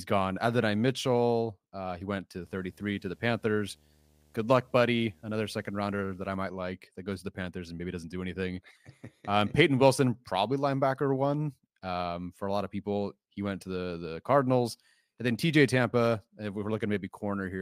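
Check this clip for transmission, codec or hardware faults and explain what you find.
One fault is present in this speech clip. From 2.41 to 6.36 s there is video or display buzz. A screen or video cable is coupling into the audio path. It produces a 75 Hz buzz at the picture's field rate, with hash above it. It sits roughly 35 dB below the speech.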